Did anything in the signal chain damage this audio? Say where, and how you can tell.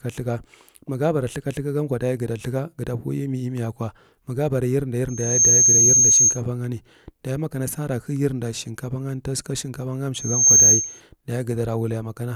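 Yes. Loudspeaker feedback squeal, at the playback stage. A 6.4 kHz tone swells within about a third of a second at 5.08–6.42 s, before "bani daye ma sa", and at 10.14–11.01 s. It rises roughly 10, then 15 dB over the speech. The microphone hears its own loudspeaker, and loop gain at 6.4 kHz exceeds one.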